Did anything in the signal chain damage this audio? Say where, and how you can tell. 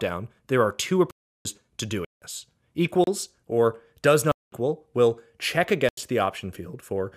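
Yes. There are five blocks of digital silence, which point to the driver or buffer stage. The sound cuts out and back with no fade at 1.11–1.45 s (about 341 ms), 2.05–2.22 s (171 ms), 3.04–3.07 s (32 ms), 4.32–4.52 s (206 ms) and 5.89–5.97 s (85 ms). Several of those lengths fit power-of-two buffers of 16384, 8192 and 4096 samples, so the output wasn't filled in time and zeros went out instead.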